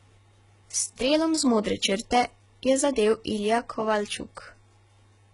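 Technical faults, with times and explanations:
Throughout: HE-AAC compression. The speech carries heavy codec damage, with nothing above 11 kHz and a treble band that sounds rebuilt rather than recorded. This is likely HE-AAC, which fits a very low bitrate near 12 kbps. The encoder keeps only the lower spectrum and synthesises the top by copying lower bands upward under a coarse envelope. The copied harmonics do not line up with the real ones across the crossover, so s sounds turn gritty, metallic or lispy.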